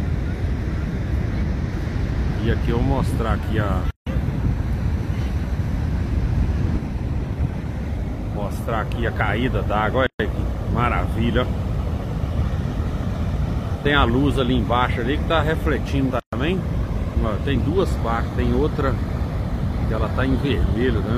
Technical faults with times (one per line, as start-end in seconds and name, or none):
3.91-4.07 gap at a join of encoded pieces
10.07-10.20 gap at a join of encoded pieces
16.20-16.33 gap at a join of encoded pieces